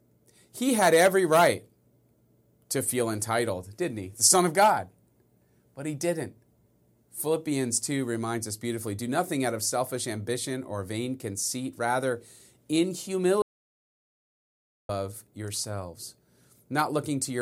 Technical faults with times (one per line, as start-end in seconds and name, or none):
13.42-14.89 audio dropout to silence